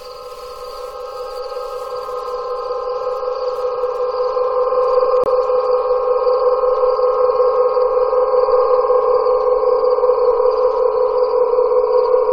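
At 5.24 to 5.27 s, a compressed frame arrived with flipped bits, the decoder rejected it, and the player filled the gap with silence: a corrupt frame muted. The sound drops out abruptly for about 35 ms, a gap the length of a single frame, then resumes in place without shifting the timing.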